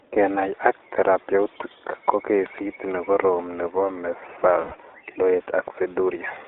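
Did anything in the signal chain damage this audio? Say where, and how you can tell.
Yes. At the codec stage, the whole speech clip carries the iLBC codec's sound. The band is confined to roughly 300 Hz to 3.7 kHz, and the texture is plainly rough and slightly synthetic. iLBC codes each 20 ms frame's excitation on its own, and this character fits its 15.2 kbps mode. On a spectrogram you'd see a hard ceiling near 3.7 kHz with empty space above it and a thin, trimmed low end throughout.

At the network stage there are lost iLBC frames from 4.62 to 4.74 s, about 100 ms, which fits five 20 ms frames failing to arrive. The decoder fills the gap by repeating the last pitch cycle blended with noise, so the gap sounds like a held, faintly buzzy vowel. On the waveform this shows as an unnaturally regular repeating cycle, and on a spectrogram as flat, unmoving harmonic lines. Because each frame stands alone, the speech snaps back immediately afterwards.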